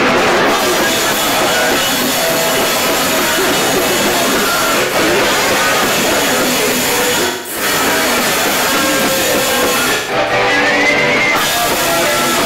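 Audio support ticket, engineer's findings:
AAC frame loss with concealment, decoder side. Frames dropped; decoder rebuilt gaps from last good spectrum. 0.56–0.62 s: brief smeared, noisy patch, about 43 ms missing, fits one lost frame. 4.83–4.94 s: about 85 ms, phasey smear, fits two frames. 7.26–7.62 s: about 213 ms, concealment decays toward silence then fades back. 9.95–10.32 s: about 213 ms lost in bursts, longest run around 150 ms, smeared, noisy patches.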